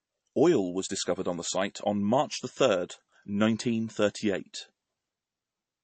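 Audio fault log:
throughout: MP3 compression, plainly audible. Nothing sounds above 8.3 kHz, and the speech has a watery, swirling texture, likely from an MP3 encoder starved of bits, which fits roughly 34 kbps, cutting the treble and switching weak frequency lines on and off between frames.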